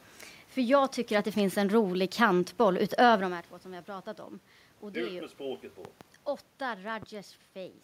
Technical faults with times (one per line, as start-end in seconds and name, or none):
5.85-6.03 loud pop
7.02-7.05 loud pop